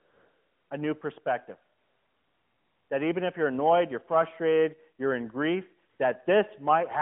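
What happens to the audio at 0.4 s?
AMR comfort noise runs from the start of the clip to about 0.70 s, so at 0.4 s you are hearing it. For roughly the first 695 ms, the sending phone treated the line as silent and sent no speech frames. The receiving end filled that gap with synthetic noise built from a rough description of the background's level and spectral shape. What comes through is a steady, smooth hiss in place of the real room sound.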